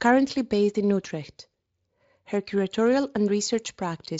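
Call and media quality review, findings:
Nothing stood out on listening to this speech clip.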